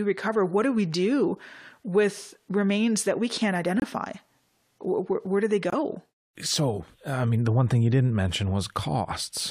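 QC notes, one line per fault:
3.80–3.84 s, corrupt frame muted: bit errors led the decoder to reject compressed frames, likely two here, and the player substituted silence, leaving an abrupt 44 ms hole with timing intact.
5.70–5.74 s, corrupt frame muted: a damaged frame, likely a single one, failed decoding and was replaced by silence, so the sound cuts out sharply for 42 ms, then resumes on time.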